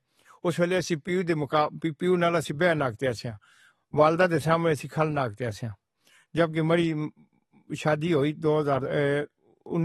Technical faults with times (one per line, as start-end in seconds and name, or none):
0.00-9.85 AAC compression